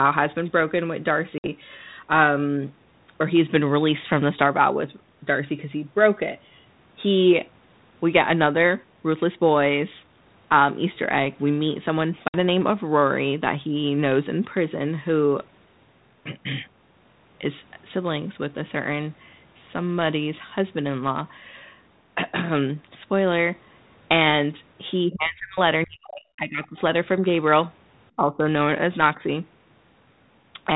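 At 1.38 s and again at 12.28 s, packet loss on an ADPCM call leaves a hard-edged 60 ms gap, the size of a few lost packets. The waveform shows a flat, abrupt hole, and the spectrogram shows a sharp vertical blank band. Because the decoder's adaptive predictor and step size lose track of the sender's, the sound resumes briefly slightly distorted before settling.

From 25.08 to 25.59 s, 25.86 to 26.77 s and 28.16 to 28.46 s, the talker is pulled down in chunks, most likely speech suppressed in double talk. The echo canceller turns the near side down while the far side is active. The waveform envelope sags, by up to roughly 40 dB in the middle stretch, and the spectrogram thins out or goes blank in patches.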